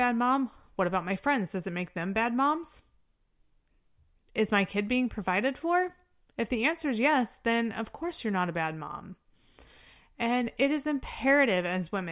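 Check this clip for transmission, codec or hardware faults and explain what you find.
Nothing turned up here: the speech runs along without any transmission, codec or hardware trouble that I could hear.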